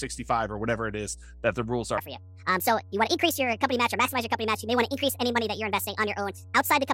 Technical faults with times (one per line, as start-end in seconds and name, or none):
0.00-6.94 mains hum
1.98-6.94 section at the wrong speed